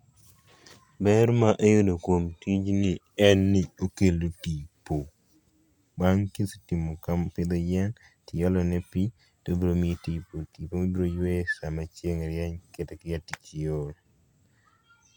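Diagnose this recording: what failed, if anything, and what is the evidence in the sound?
Nothing failed here: the speech runs steadily, with no dropouts, clicks, distortion or glitches at any stage for an engineer to chase.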